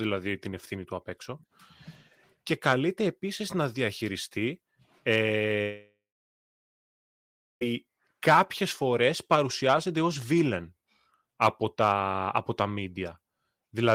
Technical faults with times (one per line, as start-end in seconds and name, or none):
5.61-7.63 long network dropout